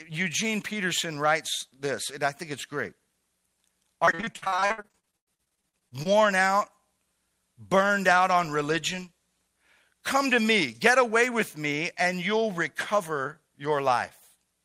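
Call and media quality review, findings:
Repeated packet loss (robotic sound), 4.05–6.07 s: choppy speech with pieces missing, 30 gaps, longest 98 ms, 42% of span concealed. Network path/jitter buffer; concealment stretches the last frame over each hole. Unlike an isolated dropout, the gaps recur densely enough to sound robotic.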